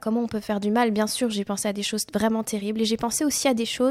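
Nothing stood out as a technical fault on listening to the speech recording.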